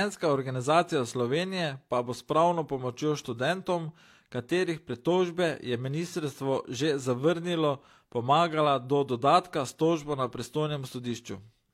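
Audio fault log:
No fault is logged for this speech audio.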